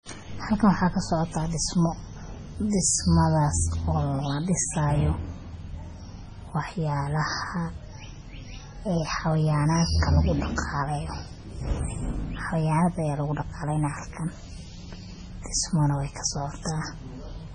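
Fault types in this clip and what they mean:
MP3 compression: likely a starved MP3 encode, fitting roughly 24 kbps, which removes everything above 10.5 kHz and leaves the speech heavily watery and swirly.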